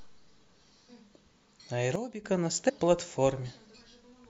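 At 0.88 s the speech lurches forward with a short smeared blip, losing roughly 150 ms, which fits about seven 26.1 ms frames of compressed audio being skipped. From 1.96 to 2.24 s, speech and background noise together drop by about 12 dB and then recover: a sudden gain jump, likely a gain change applied without a ramp. Between 2.68 and 2.70 s another smeared skip cuts out roughly 100 ms, consistent with about four compressed frames missing.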